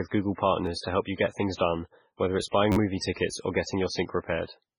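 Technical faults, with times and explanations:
Throughout, MP3 compression: the sound has nothing above 10.4 kHz and a heavy watery, swirling quality, with metallic chirps on s sounds and smeared attacks. Likely cause: a starved encoder at a bitrate near 16 kbps, cutting treble and switching weak frequency lines on and off between frames.
0.66 s and 2.72–2.76 s, repeated buffer: a 10.67 ms slice plays twice just before "to help you get", heard as a click. After "things done whether it's" it plays five times, a 43 ms buzz. Late audio made the device replay its last block, which fits a 512-sample buffer, with hard joins.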